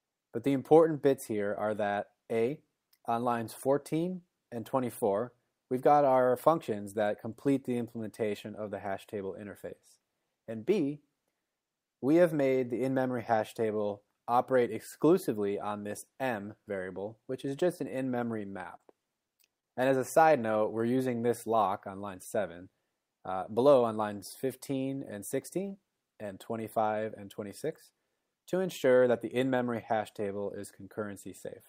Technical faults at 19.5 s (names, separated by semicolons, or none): repeated stalls (stutter)